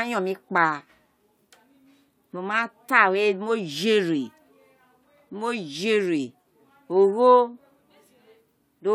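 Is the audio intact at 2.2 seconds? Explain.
Yes, the speech at 2.2 seconds is intact, with no dropout, click, distortion or other fault at that moment.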